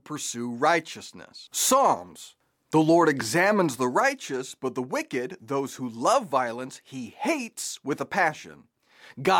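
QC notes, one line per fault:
No technical faults are audible anywhere in the speech signal.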